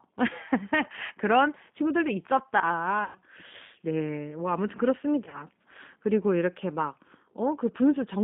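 The whole clip carries G.729 codec damage. The speech is band-limited to roughly 150 Hz–3.6 kHz and sounds plainly rough and synthetic, as the decoder rebuilds it from a vocal tract filter, a pitch predictor and sparse pulses. This is consistent with an 8 kbit/s G.729A stream.

At 3.04–3.19 s, VoIP packet loss concealed by the speech codec stretches the preceding sound into a buzzy tone or coloured noise that fades. The gap fits about 110 ms of lost frames, and the decoder extrapolates its last pitch and filter. At 5.25–5.46 s, a shorter, scattered loss of around 60 ms, with the longest run about 40 ms, leaves the speech briefly weak and distorted.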